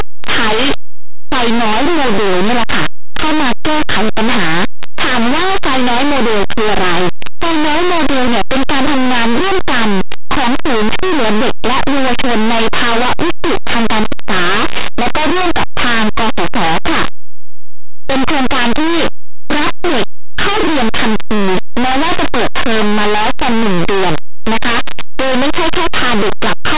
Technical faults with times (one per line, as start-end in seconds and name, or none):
0.00-26.77 linear audio read as companded